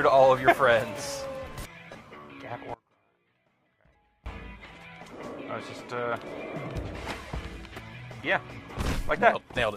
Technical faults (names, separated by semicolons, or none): audio dropout to a faint residue